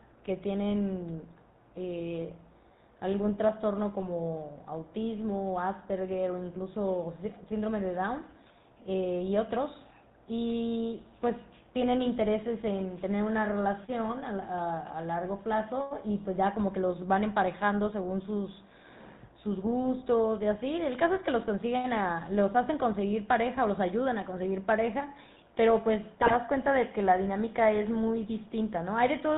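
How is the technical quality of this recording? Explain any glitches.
Quality is held back by phone-grade coding the whole way through, plus one short corrupted burst near the end.

GSM full-rate codec, throughout: the speech has the buzzy, gravelly grain of the old 13 kbps GSM coder, which rebuilds the voice from a vocal-tract filter driven by a coarse, decimated pulse excitation. Nothing above 4 kHz survives, so it sounds narrow and rough.

GSM bit errors, 26.16 to 26.37 s: for about a fifth of a second the decoder is fed corrupted filter, pitch and gain values, so the spectrum warps and the level jumps from frame to frame. You get squawks, pops and a gargling break, which fits nine damaged 20 ms frames on a weak link.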